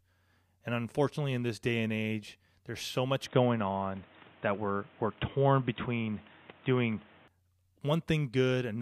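From 3.26 to 7.28 s, after "age there's so much", the speech turns dull and boxy with new background noise, likely an input switched to a poorer device; the spectrogram shows nothing above 3.8 kHz, and the waveform jumps roughly 5 dB with no gap.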